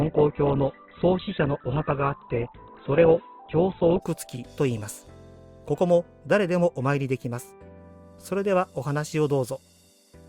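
For the first 4.0 s the audio sounds dull and boxy, with nothing above about 4.1 kHz and a smeared, watery texture from heavy codec artefacts. At 4.0 s the treble and clarity return abruptly, with no gap or dropout at the switch. This is an adaptive stream starting at a low bitrate: the player opened on a cheap rendition, which points to Opus at around 8 kbit/s, then stepped up to one nearer 64 kbit/s once it had measured the connection.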